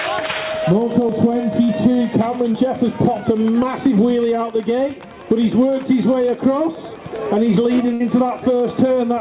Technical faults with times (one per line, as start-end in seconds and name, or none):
1.64-1.71 burst of packet loss
2.52-2.56 short concealed packet loss
7.94-8.02 burst of packet loss